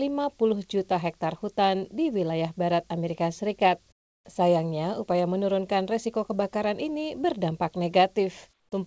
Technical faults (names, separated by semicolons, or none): comfort noise in place of the background